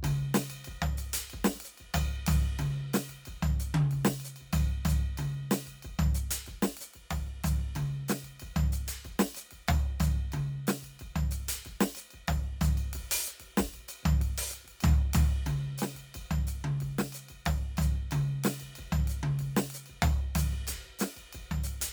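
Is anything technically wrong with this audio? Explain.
No, nothing technical stands out here; the music just runs along without any glitches worth pointing to.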